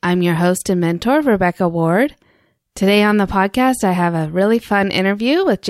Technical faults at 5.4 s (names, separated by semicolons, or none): none